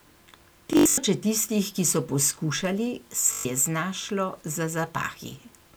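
From 0.73 to 0.98 s, just before "tistih ki so poskušali", Bluetooth stutter breaks up the speech. Packets arrived late or not at all, so the receiver kept replaying its last short slice: about 183 ms is missing across that stretch, the longest unbroken run 81 ms, heard as a buzzy machine-gun repeat. A second burst from 3.33 to 3.45 s, after "tistih ki so poskušali", loses about 122 ms. A spectrogram shows identical repeating vertical stripes, and the waveform shows copied blocks before the speech jumps ahead.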